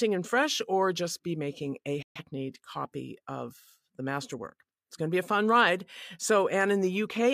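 A speech clip with a digital broadcast dropout from 2.02 to 2.21 s, between "just be making a" and "copy of the". The receiver muted after failed frames, fading out in about 3 ms. The programme resumes later, with about 128 ms missing, which fits roughly three lost frames.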